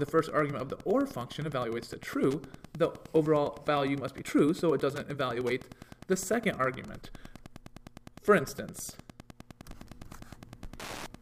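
A steady ticking about ten times a second, some 20 dB below the sound, runs throughout: Wi-Fi interference, with a nearby radio's 102.4 ms beacon rectified into the audio circuit.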